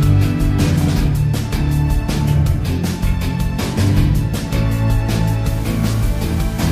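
From 5.46 s to the end at 6.72 s, the signal was likely reduced to a very low bit depth without dither, rounded to only 64 levels, which fits 6-bit resolution. Because the rounding error tracks the waveform rather than spreading as smooth noise, the sound turns grainy and gritty, with distortion that shifts as the material changes, sitting around 25 dB below the signal, and anything quieter than one step drops out or sputters between steps.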